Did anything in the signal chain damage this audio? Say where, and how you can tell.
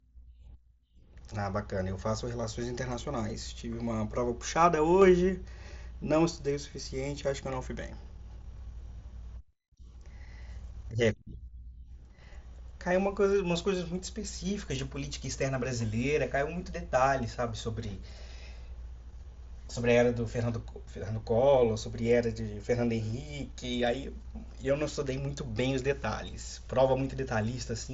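Yes. A sudden gain jump sits at 5.02 to 5.29 s: speech and background noise step up together by about 4 dB from one sample to the next, then hold there. This is likely a digital gain stage in call processing applying its change without a ramp.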